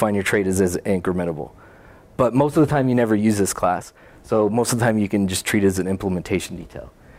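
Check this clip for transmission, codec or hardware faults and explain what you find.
No transmission, codec or hardware faults can be heard anywhere in this clip.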